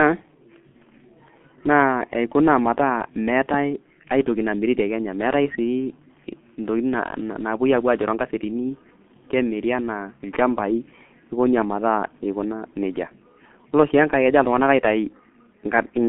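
Throughout the speech, a G.723.1 codec leaves everything above 3.7 kHz gone and the voice hoarse and smeared, its consonants blurred. Its heavy damage points to a rate near 6 kbit/s; a plain telephone band limit would muffle without this grainy, slowly updating roughness.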